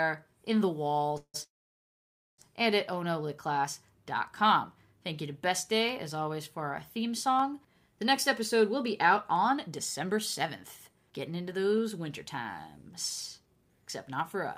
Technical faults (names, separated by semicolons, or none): periodic USB or driver dropouts; call audio freeze; jitter buffer speed-up